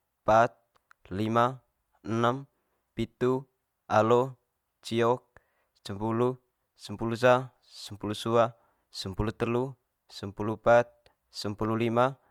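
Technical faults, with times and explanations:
No technical faults can be heard anywhere in the recording; the signal stays steady and intact from the first moment of the speech to the last.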